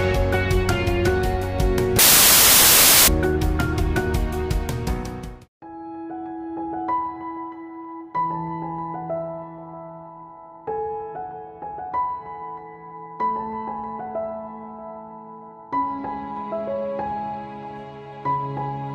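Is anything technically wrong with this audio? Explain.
Yes, there's one clear problem. From about 1.99 to 3.08 s the audio turns into samples built from the wrong bytes. The reader stitches each sample's bytes together incorrectly, whether off by a byte or in swapped order, so the jittery low-order bits end up as the big part of every value. What you get is a blast of loud, harsh broadband noise for just over a second.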